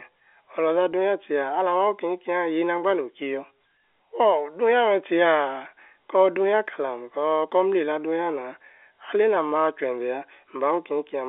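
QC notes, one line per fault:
Nothing to flag here, just the narrow 300 Hz to 3.5 kHz band you'd expect from G.711 telephone coding, and nothing else catches the ear.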